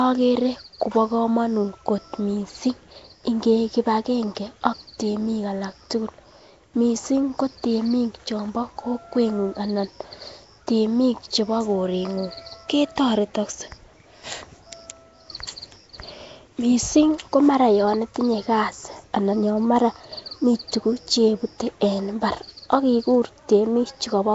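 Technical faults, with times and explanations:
throughout: Nellymoser compression. The speech has a rough, hissy halo and a smeared, underwater quality, and nothing is present above 7.7 kHz. The likely cause is the Nellymoser Asao codec used for Flash microphone audio, at a rate that fits 32 kbps. It codes short fixed blocks with very few bits per sample, so weak frequency bands get no bits and are filled with noise, which blurs the sound and leaves hiss clinging to it.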